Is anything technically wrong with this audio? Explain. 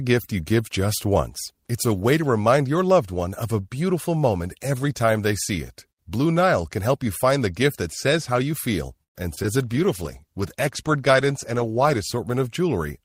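Yes, there are three kinds of fault, all clustered near the end.

Right after "says how you feel", at 9.03 to 9.17 s, there's a call audio freeze. It's a near-silent gap of about 110 ms, likely from packets stalling until the jitter buffer ran dry. The speech then resumes where it stopped, with nothing lost.

Just after "how you feel and", there are two bits of short concealed packet loss, at 9.35 to 9.47 s and 9.43 to 9.46 s. Each is about 20 ms of missing audio that the decoder patched over by extending the previous sound, so you hear a brief smear.

From 9.65 to 12.93 s there's a call bitrate drop, from 32 to 17 kbps. The rate sits at the lowest level for about 2.5 s, and the coarser coding makes the speech sound rougher until it recovers.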